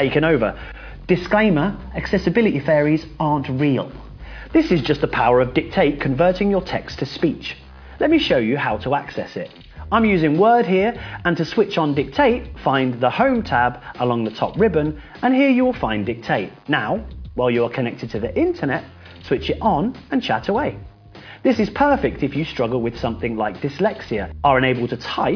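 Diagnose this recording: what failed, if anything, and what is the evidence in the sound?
Nothing stood out on listening that would point to a failure at any stage of the chain.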